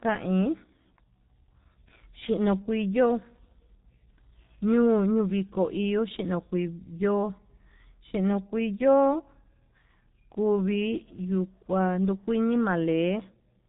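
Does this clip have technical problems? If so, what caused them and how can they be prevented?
Yes. The speech is coded with the G.723.1 codec throughout, with heavy damage. Nothing above 4 kHz survives, and the slowly updated 30 ms frame model smears consonants and adds hoarseness, consistent with about 6.3 kbit/s. To prevent it, use a wideband codec at a higher bitrate.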